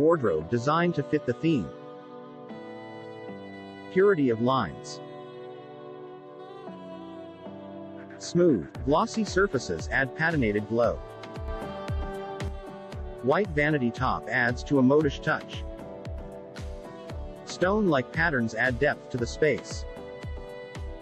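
At 11.48 s a sudden gain jump raises sound and background noise together by about 6 dB until 12.48 s, likely an unramped digital gain change, showing as abrupt envelope steps and uniformly brighter spectrogram columns.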